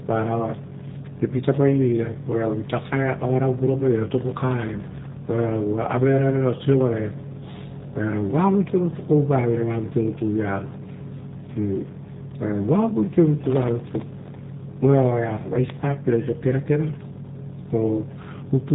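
G.729 codec damage runs through the whole speech clip. The speech is rebuilt from a vocal tract filter, a pitch predictor and a few pulses per short frame, so it sounds plainly rough and synthetic, consistent with an 8 kbit/s G.729A stream, and nothing above 3.8 kHz survives.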